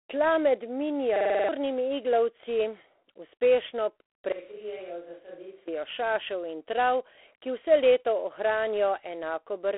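Speech, about 10 s long, coded with G.726 ADPCM at 24 kbit/s throughout. The band runs from 300 Hz to 3.4 kHz, and nothing above 3.9 kHz survives. At this rate the coder spends only three bits a sample on the error of its adaptive prediction. That coarse step size is plainly audible as a harsh, rasping hiss. The hiss rises and falls with the speech level. From 1.16 to 1.49 s there is a system hang loop. A 46.44 ms slice of audio repeats exactly seven times, at 21.5 Hz. It sounds like a rapid, buzzing stutter. The loop length fits a 2048-sample ring buffer that the sound hardware kept replaying while the machine froze. Roughly 300 ms of real audio is missing there. From 4.32 to 5.68 s the sound turns suddenly roomy and hollow, with thinner bass. The level falls by about 10 dB. Room noise comes up to about 35 dB below the speech. Both changes are abrupt, in and out. The likely cause is a switch to a distant microphone after the close one dropped out.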